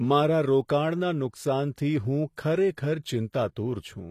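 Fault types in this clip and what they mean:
HE-AAC compression: The speech's treble sounds synthetic, and nothing reaches above 14.9 kHz. This is likely spectral band replication rebuilding the top from copied lower bands, so harmonics misalign and sibilants turn gritty. The damage is plainly audible, consistent with roughly 24 kbps.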